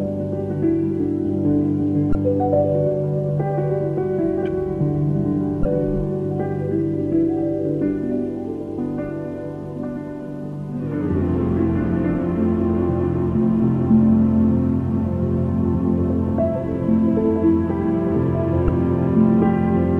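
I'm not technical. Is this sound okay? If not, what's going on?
No. Three very short glitches cut into the sound, each like a tiny chirp, squawk, click or short gap, at 2.12 to 2.15 s, 5.62 to 5.65 s and 18.65 to 18.69 s. This is damaged data in a compressed stream: a small piece of the compressed file is corrupted. When the player reaches it, it can't read that stretch properly, loses its place, and hunts for the next readable chunk, so you hear a brief blip instead of the real sound.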